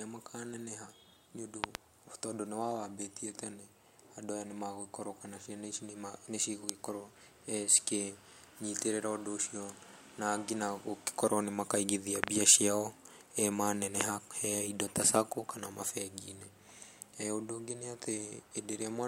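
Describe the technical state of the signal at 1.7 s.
A loud pop occurs between 1.64 and 1.77 s: two sharp pops in quick succession, peaking far above the speech level (roughly 25 dB louder), with the speech continuing underneath. The likely cause is a sudden voltage step or pulse, from a plug, a switch or a static discharge, added to the signal. The circuits downstream shaped that pulse into brief, percussive bursts that sit on top of the recording rather than replacing it.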